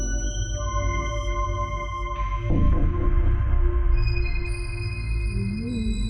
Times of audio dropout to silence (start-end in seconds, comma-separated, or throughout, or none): none